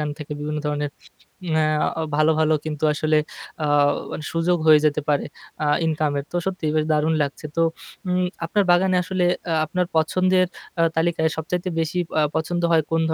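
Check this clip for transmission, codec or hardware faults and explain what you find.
No faults turn up anywhere in this speech recording. Nothing in the audio calls for a fix or further explanation.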